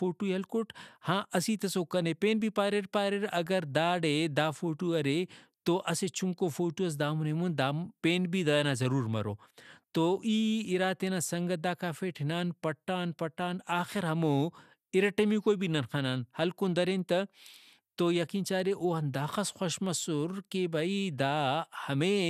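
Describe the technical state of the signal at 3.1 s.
At 3.1 s the speech carries the generation loss present throughout the clip: swirly, hollow and smeared, with blurred attacks and nothing above 16 kHz. This is likely from repeated lossy re-encoding, perhaps seven times. Unlike a single low-bitrate encode, re-quantising on shifting frame grids stacks noise and spectral holes beyond what a 128 kbit/s MP2-like codec alone would cause.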